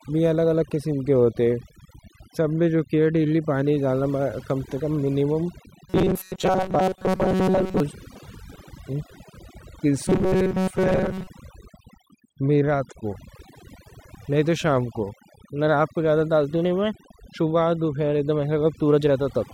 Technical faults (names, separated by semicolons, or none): overdone noise removal; robotic sound from repeated short buffers